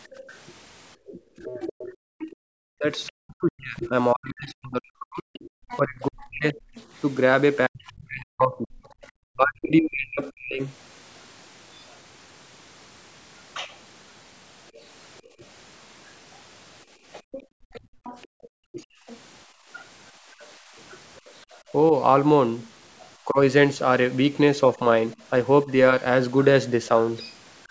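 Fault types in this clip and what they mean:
Background gated by the echo canceller: The room sound briefly dips and then comes back. There is a short dip of about 9 dB between 0.13 and 0.22 s, lasting roughly 40 ms. A deeper, patchier one of about 17 dB comes and goes between 15.22 and 21.66 s, adding up to around 1.5 s. Each time, the echo canceller heard its loudspeaker playing and turned the microphone down hard, releasing it once the far-end sound stopped.
Other side's voice leaking through: A second, fainter voice sits underneath the main talker. It runs from 0.27 to 10.32 s at roughly 15 dB below the speech, and from 14.75 to 21.72 s at roughly 20 dB below. The likely cause is that the talker's device played the far end on a loudspeaker, and the echo canceller left part of that playback in the microphone signal instead of removing it completely.
Speech suppressed in double talk: The talker's own voice sinks or breaks up in pieces. 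Between 1.08 and 10.61 s it drops by as much as roughly 40 dB, over about 5 s in total. It happens again briefly, for roughly 0.2 s, between 17.74 and 18.8 s. Shallower dips of around 10 dB occur between 23.25 and 25.69 s. Both sides were likely talking at once, so the canceller could not separate its talker from the echo.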